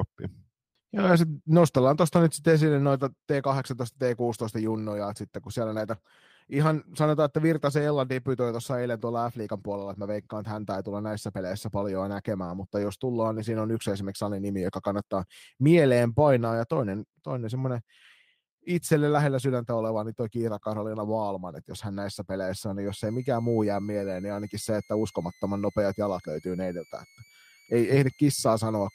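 From 22.87 s to the end, a faint high whistle near 2 kHz sits under the speech, wandering between 2.02 and 2.31 kHz, far below the speech level. This is switching supply whistle: a power converter running in an audible burst mode or beating with another supply.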